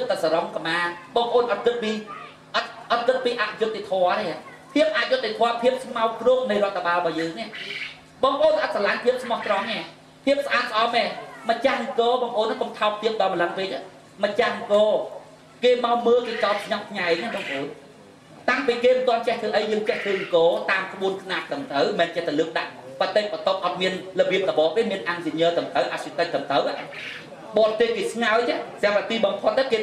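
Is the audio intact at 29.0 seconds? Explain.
Yes, the audio is intact at 29.0 seconds, with no dropout, click, distortion or other fault audible at that point.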